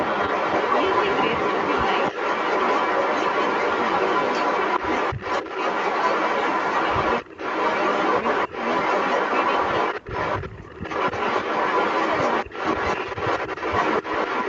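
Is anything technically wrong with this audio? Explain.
Yes, two things stand out. Throughout the whole clip there's an echo leak: a second copy of the speech trails the original by about 274 ms, sitting roughly 10 dB below it. That's most likely a far-end speakerphone whose echo canceller didn't fully scrub what its mic picked up, so it came back down the line.

There's also speech suppressed in double talk, in short bursts at 7.23 to 7.39 s, 10.0 to 10.1 s, 10.67 to 10.83 s and 12.45 to 12.55 s. The speech briefly ducks, by around 20 dB at the deepest, for a tenth of a second or so each time. It sounds like the canceller couldn't separate the talker from the echo while both sides were active, and turned everything down.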